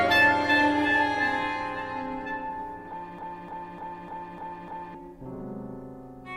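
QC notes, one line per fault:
3.19–4.95 s, broken-record loop: a 0.3 s fragment repeats six times back to back, likely from a stalled stream resending its last buffer, so the intended audio is lost.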